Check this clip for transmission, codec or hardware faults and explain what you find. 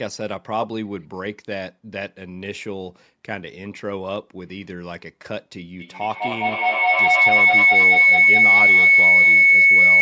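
One fault: feedback howl from 5.8 s to the end, a tone near 2 kHz with repeats about every fifth of a second and peaking about 14 dB above speech. Two devices share a room, so each loop trip adds gain. Unlike echo, repeats grow rather than fade.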